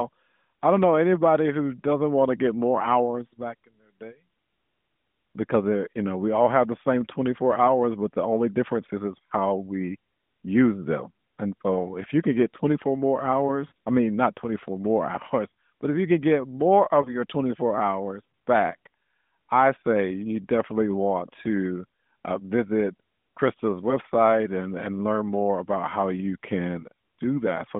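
At 13.68 to 13.72 s and 17.02 to 17.10 s, lost AMR speech frames leave brief warbled dips: the decoder repeats the last good pitch and vocal tract settings at falling gain, showing as smeared, fading harmonics and a sagging waveform envelope.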